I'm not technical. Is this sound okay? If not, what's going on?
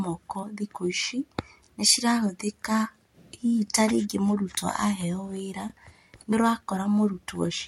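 No. The speech has overlapping chunks: at 3.68 to 3.70 s, between "nĩcirahũthĩka hihi" and "ta rĩngĩ", and again at 5.70 to 5.72 s, about 21 ms of sound plays twice. That causes a tiny stutter every 2 seconds. A dropout would lose sound, but here nothing is missing.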